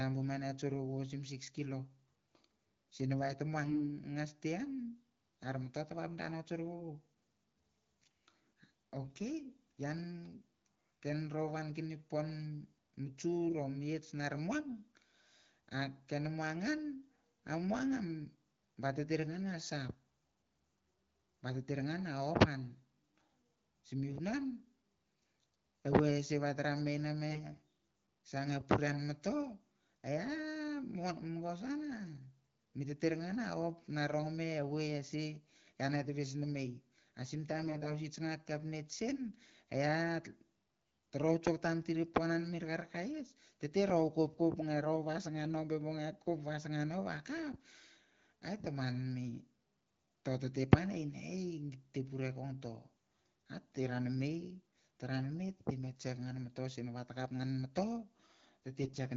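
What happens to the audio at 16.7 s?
Nothing goes wrong at 16.7 s; the speech carries on intact through that moment.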